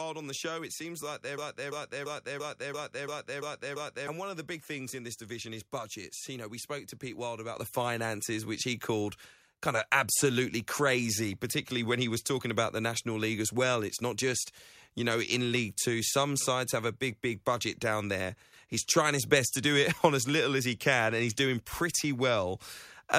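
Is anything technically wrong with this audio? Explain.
Yes. At 7.56 s and again at 8.58 s the whole level jumps abruptly, voice and background together, by about 7 dB and then about 1 dB. This is microphone volume stepped up: the call software judged the input too quiet and raised the device's input gain in single steps.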